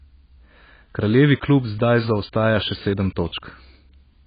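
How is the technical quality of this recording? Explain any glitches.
Poor: the speech sounds dull and smeared throughout, with a warbling, fizzy texture on sustained sounds and sibilants and nothing at all above about 4.9 kHz. This is likely AAC compression, with AAC-LC coding at a starved bitrate (the damage fits roughly 16 kbps), lowering the cut-off and quantising the remaining spectrum so coarsely that holes and substitute noise replace real detail.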